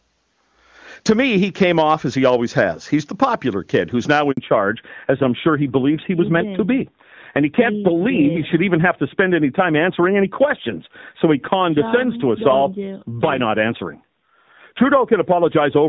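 A speech recording of a phone call, carrying three faults. Hard clipping runs through the whole clip. The signal was driven about 6 dB past what one stage could pass, so the loudest peaks are sliced flat. Only a small share of samples, around half a percent, hit the ceiling. That is why it sounds like brief crackle on loud syllables rather than constant fuzz. The flat tops add high harmonics that the ear hears as grit. At 4.31 s there is a handover gap. The call moved to a different network and no speech frames arrived during the switch. The audio fades out quickly and stays silent for about 60 ms, until 4.37 s. Whatever was said in that slice is gone. Right after the gap comes a fallback to narrowband, lasting to the end of the clip. Before the switch, the sound reaches well above 4 kHz, as expected from HD Voice, and the AMR-WB coding there is clean, which fits a high rate like 23.85 kbit/s. 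From 4.37 s on, nothing above 4 kHz remains. The speech turns duller and somewhat rougher. This fits a drop to the older AMR narrowband codec at a low rate such as 7.4 kbit/s.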